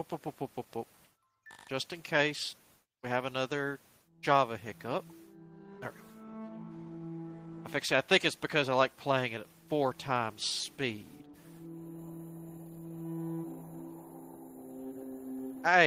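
Right from the start there's clock drift between sender and receiver: the sending end's clock runs fast, by roughly 4 percent. Samples arrive a bit quicker than the receiving side plays them out, so its jitter buffer keeps filling up rather than holding steady. Nothing breaks outright, but the timing never quite settles, and you get small hiccups scattered through the whole clip at irregular spacing instead of a clean, even flow.

To keep that buffer from overflowing, you hear repeated timing corrections from 0.00 s all the way to about 15.76 s. Because the sender is running ahead, the receiver keeps trimming out short slivers of audio, always cutting, never padding, which nets out to playback running at around 104 percent. Each cut is tiny, so it comes across as faint stumbles and a slightly uneven, hurried pace rather than obvious gaps.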